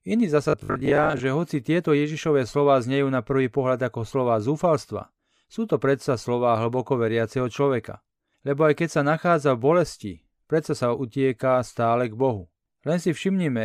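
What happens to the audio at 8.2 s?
Nothing goes wrong at 8.2 s; the speech carries on intact through that moment, with no dropout, click, distortion or other fault to be heard.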